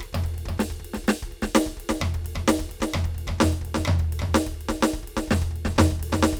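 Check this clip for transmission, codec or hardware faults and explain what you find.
The music carries a doubled audio track from start to finish. A second, full-band copy of everything follows roughly 300 ms behind the original and sits about 5 dB lower, so every attack is heard twice. The likely cause is the same signal being captured again through a slower path, or an edit holding two copies out of step. Unlike a room echo or reverb, the copy is a single clean repeat with no decay tail and no added room colour.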